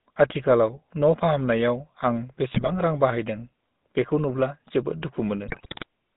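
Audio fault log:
throughout, GSM full-rate codec: The whole thing has that gravelly, buzzy GSM roughness, squeezed into roughly 150 Hz to 3.7 kHz. The coder rebuilds the voice from a vocal-tract filter fed with sparse pulses, so fine detail turns to grit, which fits the 13 kbps full-rate codec.
2.52–2.70 s and 5.48–5.86 s, GSM bit errors: Right after "फाहामनायाव आं" and again after "नुब्ला जोबोद" the speech breaks into squawks and gargling. Corrupted bits hit the filter, pitch and gain values, so frames come out with warped spectra and jumpy level. The second burst is longer and rougher.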